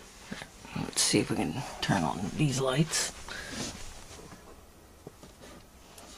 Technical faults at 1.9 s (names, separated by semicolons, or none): none